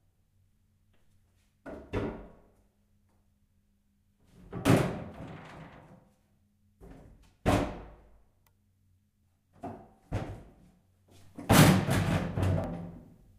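Everyday sound with two brief skips, at 4.65 s and 12.64 s. Both come from overlap between stream segments. About 5 ms of audio is dropped at each of these two segment joins, so the waveform jumps. The skips fall 8 s apart, which matches 4-second segments.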